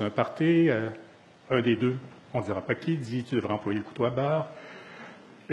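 The audio's treble turns synthetic abruptly at about 1.0 s and stays so, with smeared, swirly codec artefacts, through to the end, with no gap at the switch. That is an adaptive stream at a lower bitrate, a sudden drop to a much leaner encoding, pointing to something like a low-rate HE-AAC stream.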